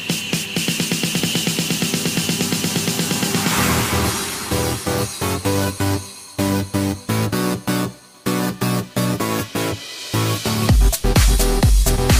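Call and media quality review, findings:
Short blip at 10.45 s, damaged data in the compressed stream. Decoder hit corrupt bytes, lost frame sync, skipped ahead to the next good header.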